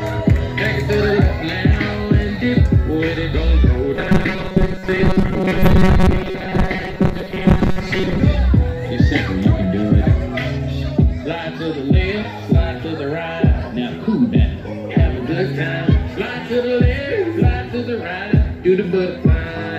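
From 3.96 to 8.2 s, robotic sound from repeated short buffers gives a metallic 188 Hz buzz, likely from about half the audio being replaced by repeated 5.3 ms chunks. It shows as evenly spaced harmonic lines on a spectrogram and identical periodic cycles in the waveform.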